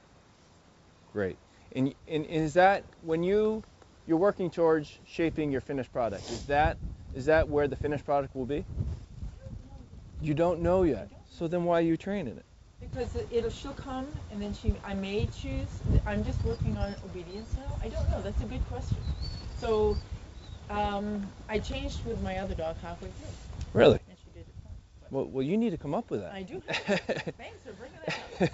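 Nothing stood out on listening, and the audio carries nothing above 8 kHz, as expected from a wideband call path such as G.722.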